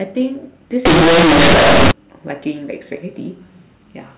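From 0.85 to 1.91 s, mu-law telephone bytes are played as plain linear 8-bit samples with no expansion. This companded audio read as linear turns the speech into harsh, loud buzzing with heavy noise.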